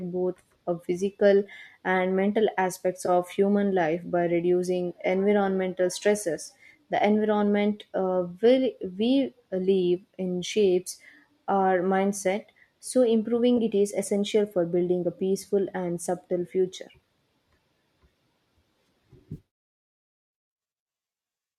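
Three brief dropouts are AAC frame loss with concealment. From 3.06 to 3.09 s, between "physical and mental aspects" and "human life by reducing", then at 13.57 s just before "it is essential for", and from 19.33 to 19.38 s, the sound turns momentarily smeared and noisy. The lengths fit two, one and three lost 10 ms frames respectively, likely from the low-delay AAC stream, whose coding is light. The decoder patched each gap from the previous spectrum, so on a spectrogram the harmonics blur into flat noisy columns. In the waveform each one shows as a short stretch of altered texture rather than true silence.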